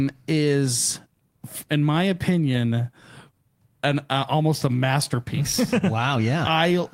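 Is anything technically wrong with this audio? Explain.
Yes, there are two related timing faults in this speech.

Clock drift between sender and receiver runs throughout: the sender's clock is roughly four percent fast, so the receiver's jitter buffer keeps overfilling and must shed audio.

Repeated timing corrections occur from 0.02 to 6.77 s. The receiver keeps cutting short pieces to keep pace with the 104% sender rate, heard as small, unevenly spaced hiccups.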